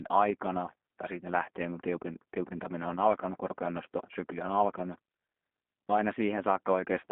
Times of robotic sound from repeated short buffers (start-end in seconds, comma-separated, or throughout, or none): none